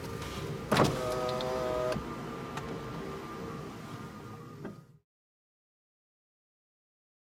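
No technical faults can be heard anywhere in this recording of sounds. There is nothing to mark on its timeline.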